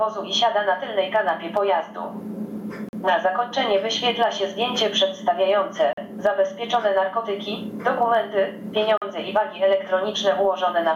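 Gain pumping runs through the whole clip: the gain is pulled down by roughly 20 dB under each loud sound, most likely from excessive input gain driving a fast limiter. A gap between chunks cuts in at 2.89, 5.93 and 8.97 s, each a 44 ms hole repeating every 3 s. Nothing is lost at these joins, unlike a dropout.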